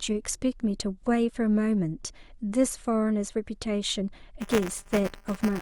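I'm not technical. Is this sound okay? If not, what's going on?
No. Buffer tearing starts at 4.4 s and lasts to the end: a robotic 200 Hz buzz over the speech. The playback software and sound hardware have slipped out of step, so inside each short buffer sits a sliver of audio from about a hundredth of a second earlier.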